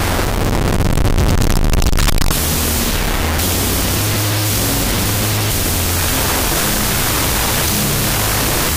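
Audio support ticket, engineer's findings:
Wrong sample width, whole clip. Loud hiss-like noise with the real sound buried underneath, running at half speed, an octave low. Fits 16-bit data read as unsigned 8-bit, each byte becoming its own sample. Likely file reader or format header.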